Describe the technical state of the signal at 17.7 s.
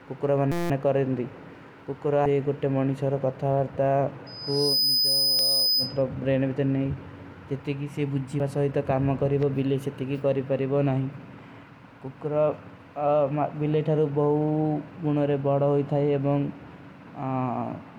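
At 17.7 s the signal is intact, with no audible technical fault at that moment.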